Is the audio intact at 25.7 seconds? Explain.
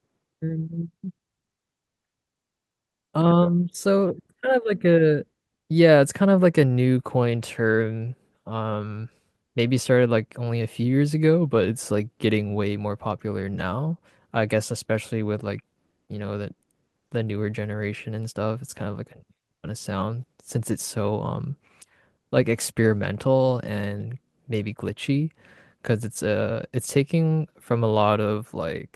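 Yes, the audio is intact at 25.7 seconds, with no dropout, click, distortion or other fault to be heard at that point.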